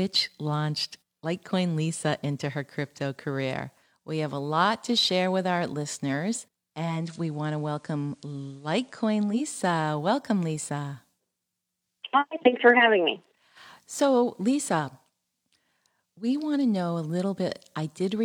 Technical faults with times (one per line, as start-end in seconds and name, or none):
6.71-9.62 digital radio blending to analogue